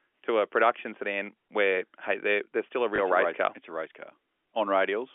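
Packet loss with last packet repeated at 2.96 s, between "they're they're still a" and "race race car": a single 20 ms gap in this speech was filled by replaying the previous packet, leaving a small blip. The speech runs through G.711 telephone coding, which limits it to the 300 Hz to 3.4 kHz line band.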